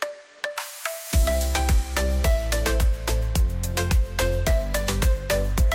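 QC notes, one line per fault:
No audible faults detected.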